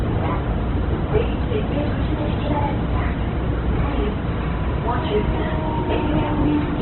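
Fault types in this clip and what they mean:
Opus compression, throughout: rough, grainy sound with nothing above 4.2 kHz, likely from Opus music-mode coding near 12 kbps filling starved bands with noise.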